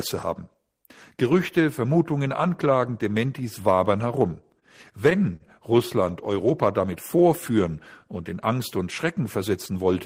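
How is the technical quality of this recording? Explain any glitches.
The recording has two brief short stalls from a late packet. At 4.59 to 4.65 s, just after "wabern herum", and again at 5.36 to 5.43 s, a packet arrived late and the jitter buffer ran dry. The receiver held the last sound for about 25 ms and then about 39 ms, giving a slightly buzzy, drawn-out instant. Unlike a lost packet, nothing is skipped: the speech resumes exactly where it paused, just shifted later.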